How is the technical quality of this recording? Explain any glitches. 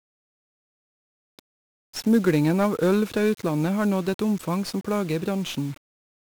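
The technical quality is poor. The speech is heavily degraded from start to finish by a single fault.

1-bit DFPWM compression runs throughout. Each sample carries one bit that nudges an adaptive level up or down, so dense broadband quantisation noise rides on the speech, making it fuzzy and crackly with treble buried in hiss. That noise follows the signal rather than sitting steady like added hiss, and it lacks the warbly swirl of perceptual codecs.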